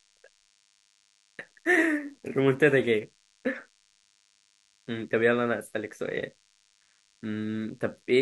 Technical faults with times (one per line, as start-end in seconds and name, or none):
0.00-8.22 DECT cordless phone buzz